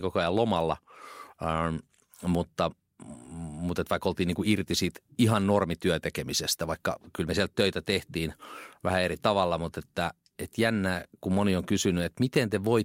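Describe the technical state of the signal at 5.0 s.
At 5.0 s the speech signal is intact, with no audible fault at that moment.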